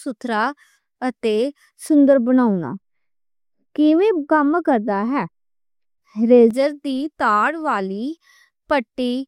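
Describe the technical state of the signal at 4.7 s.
At 4.7 s the speech is under de-emphasis applied wrongly, from 1.89 to 6.51 s. An unneeded treble cut tilts the response down smoothly, about 11 dB lower at 10 kHz than at 1 kHz, so it sounds dull and muffled. A spectrogram shows the upper bands visibly faded across that span.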